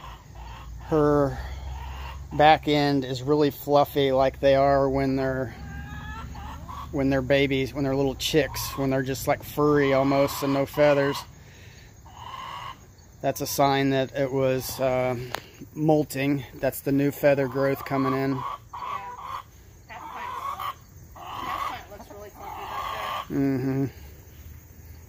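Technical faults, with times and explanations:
No technical faults detected.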